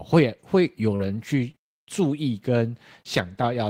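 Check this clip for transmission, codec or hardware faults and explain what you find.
Two short concealed packet losses occur in the speech, at 0.95 to 1.01 s and at 1.51 to 1.55 s. About 40 ms and then 20 ms of audio failed to arrive in time. The decoder bridged each gap by extending the preceding sound, then crossfaded back, leaving a brief smear or wobble.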